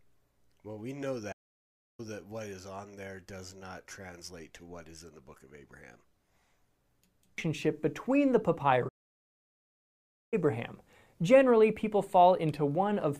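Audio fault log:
1.32 to 2.00 s and 8.88 to 10.34 s, playback stall: the speech cuts out mid-flow and goes completely silent, first for about 0.66 s, then for a longer gap of roughly 1.4 s, before picking up again. That dead air is what you get when the player likely ran dry of buffered data or had its audio thread blocked, so nothing reached the output until it caught up.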